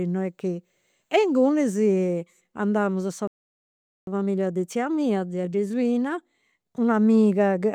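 At 3.27 s, right after "andamus sa", a playback stall silences the speech for about 0.8 s, likely from the player running out of buffered data; waveform and spectrogram go completely flat. From 4.07 to 7.07 s, time-compressed catch-up spliced out small pieces to speed delivery to 1.1x at normal pitch, sounding hurried; spectrogram harmonics stay level but syllables sit closer together.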